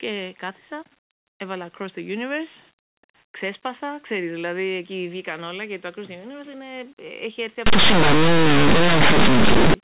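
A speech recording whose last two seconds collapse into harsh, very loud distortion: from 7.66 s, right after "έχει έρθει", to 9.74 s the sound turns into a loud, gritty roar. This is linear audio read as companded. Plain linear 8-bit samples are decoded as mu-law codes, so small values just to one side of zero expand into the largest outputs while their neighbours stay small, tearing the waveform apart.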